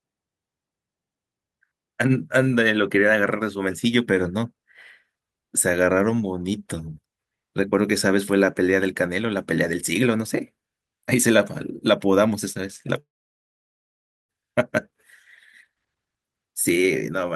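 At 12.99 s the speech breaks off into a brief fading buzz, then near silence until about 14.31 s, when it resumes with roughly 1.3 s of audio simply gone. This is a long network dropout, likely from packets that never arrived, concealed and then muted.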